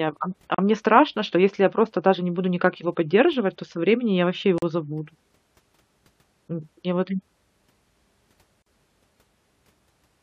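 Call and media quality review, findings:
Gap at a join of encoded pieces: silences of about 37 ms at 0.55 s and 40 ms at 4.58 s and 8.62 s, repeating every 4.0 s. Segment concatenation: untrimmed encoder delay plus final-frame padding at each join. Unlike packet loss, the spacing is regular, and the speech resumes exactly where it stopped with no concealment smear.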